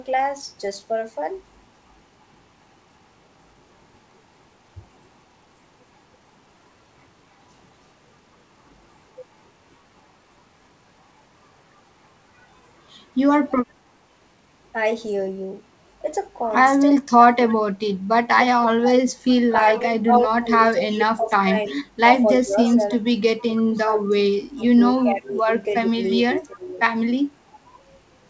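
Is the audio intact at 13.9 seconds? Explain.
Yes, at 13.9 seconds the speech is intact, with no dropout, glitch or distortion, only the normal call processing that leaves nothing above 8 kHz.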